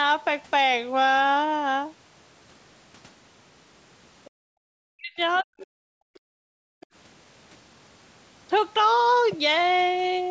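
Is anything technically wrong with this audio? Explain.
Yes. Three kinds of echo-canceller trouble show up in this speech clip.

Other side's voice leaking through, at 4.25 to 4.3 s, 6.14 to 6.19 s and 6.81 to 6.86 s: the echo canceller likely missed some loudspeaker playback, leaving brief, faint scraps of a second voice roughly 30 to 35 dB below the talker.

Background gated by the echo canceller, at 4.3 to 4.63 s and 6.12 to 6.88 s: the canceller clamped the microphone hard during playback, so the room sound drops by about 40 dB, then returns.

Speech suppressed in double talk, at 4.91 to 5.19 s and 5.4 to 5.84 s: with both sides talking, the canceller likely treated the talker as echo and turned everything down, so the voice sinks deeply, by around 40 dB.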